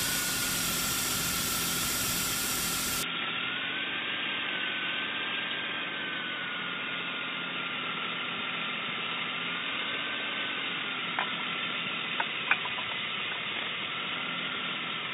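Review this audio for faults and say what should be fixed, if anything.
Input switched to a poorer device, from 3.03 s to the end at 15.13 s. At that moment the sound turns dull and boxy without any gap or jump in level, and from then on nothing is heard above 3.8 kHz, with a faint new noise floor roughly 45 dB below the signal. The likely cause is the recording input changing to a narrower-band microphone or headset call profile, whose limited bandwidth and own noise replace the original pickup. To prevent this, lock the input device and disable automatic switching before recording.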